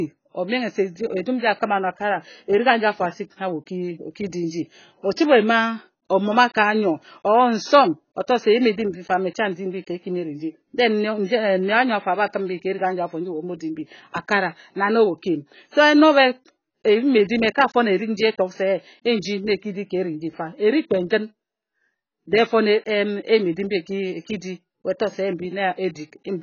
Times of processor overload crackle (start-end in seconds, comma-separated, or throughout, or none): none